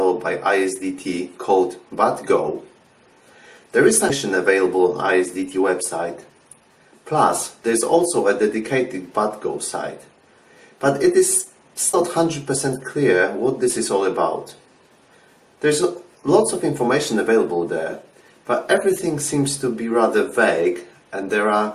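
Two short bursts of damaged data in a compressed stream show up in this audio, at 4.07 to 4.11 s and again at 11.90 to 11.95 s, each about 40 ms long. Corrupted bytes throw the decoder off, so it loses sync and hunts for the next good frame, which comes out as a brief glitch.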